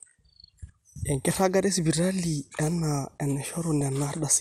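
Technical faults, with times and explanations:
Throughout, MP2 compression: the speech sounds dull and plainly gurgly, with a granular edge as upper bands flicker in and out. This is likely from MPEG Layer II coding starved of bits, as at about 80 kbps, which switches off high sub-bands and coarsely quantises the rest.
3.81 s, DAB burbling: a brief watery blip cuts across the speech as noise flickers in single sub-bands. Bit errors, at a small fraction of a percent, slipped past error correction and corrupted samples, which fits damage to a couple of audio frames.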